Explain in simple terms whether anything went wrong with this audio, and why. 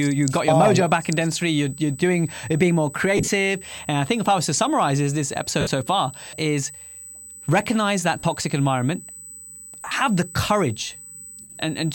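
A thin, steady, high-pitched whistle sits under the speech for the whole recording. This is USB whine: the USB connection's regular 125-microsecond timing pulses leak into the audio through the power or ground wiring and produce a fixed tone at 8 kHz.

The speech also smears into brief hissy, blurred patches at 3.17 s (after "being more"), 5.61 s (after "to summarize is this"), 8.19 s (after "recognize that"), 9.81 s and 11.41 s. The longest patch lasts about 0.2 s. These are lost LE Audio frames: pieces of the Bluetooth stream went missing, and the receiver filled each gap by reusing the last bit of sound with its detail scrambled.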